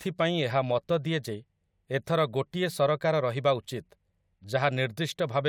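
No technical faults can be heard anywhere in the speech.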